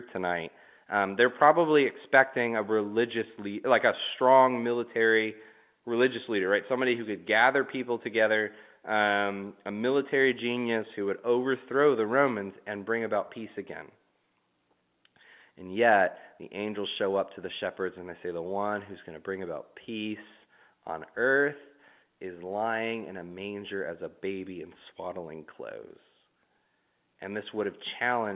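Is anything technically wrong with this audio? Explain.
No, nothing is technically wrong.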